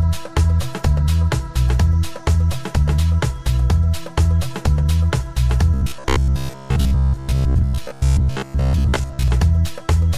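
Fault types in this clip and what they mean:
Robotic sound from repeated short buffers, 5.74 to 9.28 s: the sound turns into a rigid, metallic buzz pitched at 66.7 Hz. The likely cause is audio arriving too seldom, so playback keeps looping the last chunk of roughly 15 ms (one cycle of 66.7 Hz) while fresh material is skipped. Around 70 percent of this stretch is repeated material.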